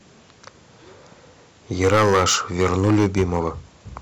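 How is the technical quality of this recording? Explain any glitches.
The recording has one clear fault, a stretch of hard clipping in the middle of the speech. From 1.82 s to 3.48 s every louder moment turns into a harsh, buzzing fuzz with a gritty edge on the peaks. The signal was driven about 15 dB beyond what a stage in the chain could pass, so the tops of the waveform were sliced flat. Those squared-off peaks add strong harmonics high in the spectrum, which is the rasp you hear.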